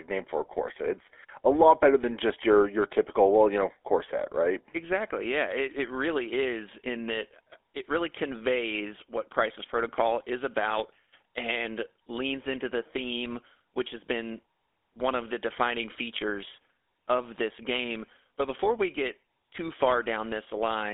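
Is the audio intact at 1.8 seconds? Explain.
No. GSM full-rate codec damage covers 1.8 s, as it does the whole clip. The codec models the vocal tract and excites it with regularly spaced pulses, which fits a 13 kbps phone link, leaving the speech buzzy and gravelly within a 300 Hz to 3.5 kHz band.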